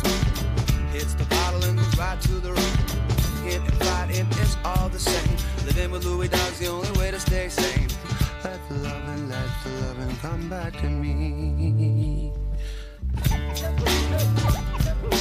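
No technical faults can be heard anywhere in the clip.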